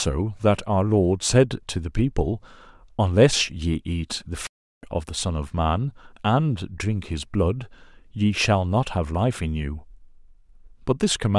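It's a speech clip with one playback stall: at 4.47 s the sound drops out mid-flow and stays silent for about 360 ms, picking back up at 4.83 s. That's likely the player starving for data or getting its thread blocked briefly.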